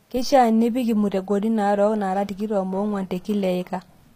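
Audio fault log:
Throughout: HE-AAC compression. The speech has a gritty, metallic treble, and s sounds turn lispy. Nothing is heard above 15.4 kHz. The damage is plainly audible, likely from HE-AAC rebuilding the treble from copied lower bands, which fits a low bitrate near 24 kbps.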